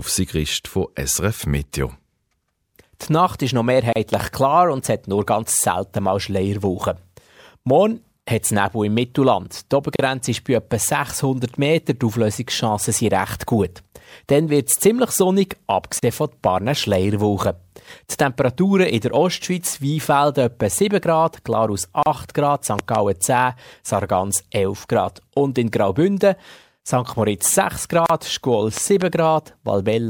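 At 3.93 s, between "ist noch" and "klar und es hat", the speech drops out for about 33 ms. It is a gap at a join of encoded pieces. Separately encoded segments were joined untrimmed, so encoder delay and end padding remain. At 4.14 to 4.22 s, a loud pop lands as two sharp clicks, about 15 dB above the speech. A likely cause is a voltage step from a plug, switch or glitch. The gaps recur every 6 s. One falls at 9.96 s, before "ist bei etwa". Another falls at 15.99 s, after "wird es ziemlich sonnig". More follow at 22.03 s and 28.06 s, each about 34 ms, with smeared edges. A double pop comes at 22.79 to 22.97 s, about 20 dB up. Another comes at 28.77 to 29.04 s, about 15 dB up. The speech carries on beneath them.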